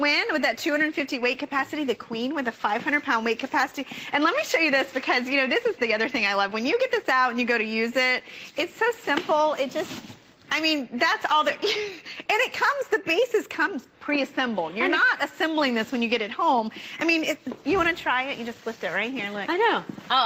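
No technical faults are audible.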